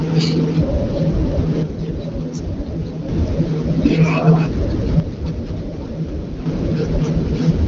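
From 1.63 to 3.09 s and again from 5.00 to 6.46 s the speech suddenly drops about 6 dB, most likely because one channel drops out before the mono sum.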